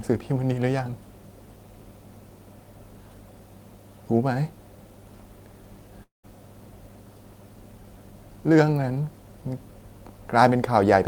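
A long network dropout, likely, interrupts this speech clip from 6.03 to 6.25 s: the last sound smears into a fading buzz, leaving about 140 ms of silence before speech resumes with roughly 200 ms missing.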